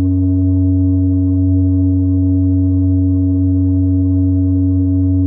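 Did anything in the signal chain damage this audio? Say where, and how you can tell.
No, nothing in the chain seems to have touched this music; it sounds just as it should all the way along.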